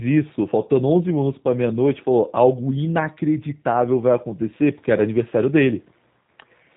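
Speech throughout the clip sounds slightly rough and synthetic, with a buzzy, hollow edge and nothing heard above about 3.8 kHz, so the sibilants lose their bite. The damage is plainly audible from start to finish. It is the sound of the G.729 codec, in its G.729A form, at a rate that fits 8 kbit/s. Each 10 ms frame is rebuilt from a vocal tract filter, a pitch predictor and a few pulses.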